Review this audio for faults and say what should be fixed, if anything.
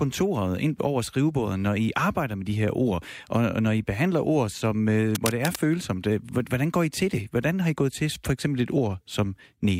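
From 5.11 to 5.56 s a dense, uneven burst of scratching noise rides over the speech, sitting not far below it in level. This is cable scratch noise, likely from a worn cable or connector being moved so its contact resistance jumps about rapidly. Unlike handling thumps, which are low and dull, or single isolated clicks, it is a rough, irregular rustle lasting nearly half a second. Replacing or reseating the cable and securing it against movement would prevent it.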